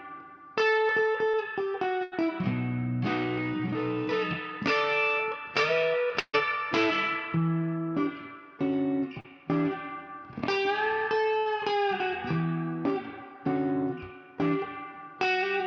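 Around 1.31 s there's a short concealed packet loss, 20 ms patched by extending the previous sound, so it's just a quick smear. At 2.03 s a burst of packet loss drops about 80 ms; the receiver holds the last sound and fades it before playback skips ahead. The 6.2 s burst is longer, about 140 ms, with the fill dying into roughly 50 ms of silence. Another concealed loss at 9.2 s covers 40 ms with a brief wobble, and a final burst at 11.38 s loses about 80 ms the same way.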